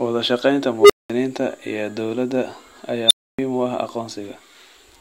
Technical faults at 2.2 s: none

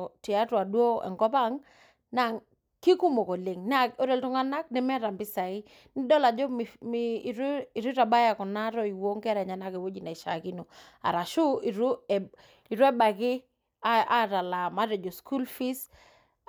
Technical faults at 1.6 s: none

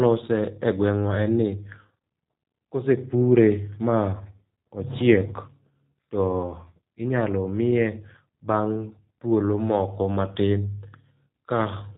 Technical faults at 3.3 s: G.729 codec

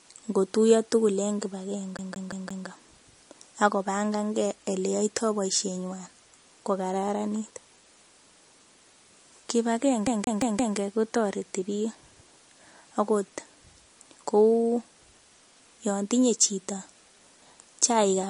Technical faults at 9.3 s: MP3 compression

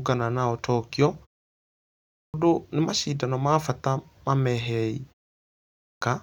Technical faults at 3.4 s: none

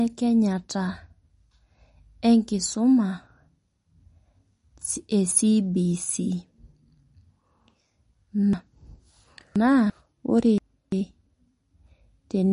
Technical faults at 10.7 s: MP3 compression; chunks out of order

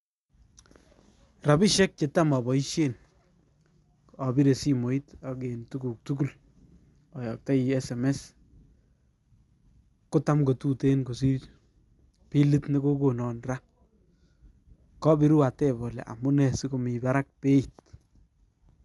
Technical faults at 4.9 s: Dolby Digital compression

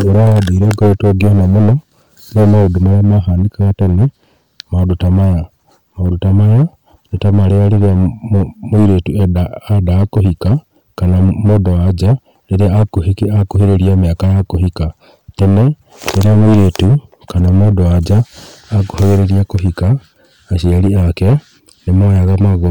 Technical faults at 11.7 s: hard clipping

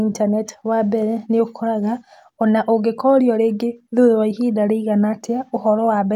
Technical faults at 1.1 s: none

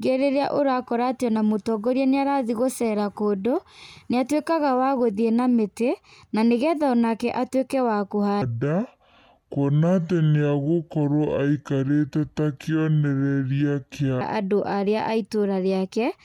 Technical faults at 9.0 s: section at the wrong speed

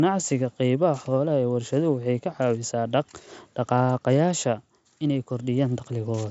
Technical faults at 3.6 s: none

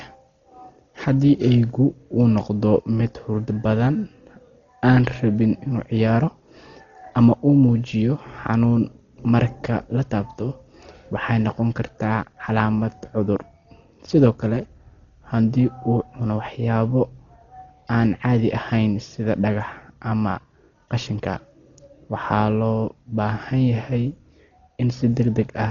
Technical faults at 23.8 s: Dolby Digital compression

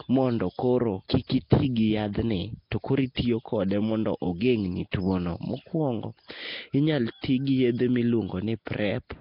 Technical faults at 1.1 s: Nellymoser compression; pre-echo

